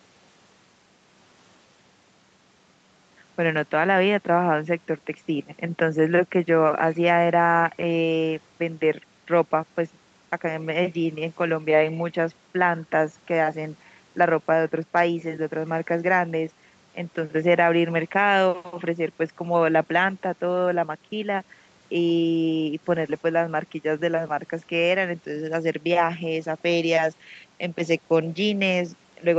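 Speech over a call path, band-limited to about 8 kHz, consistent with a wideband call codec, with no faults present.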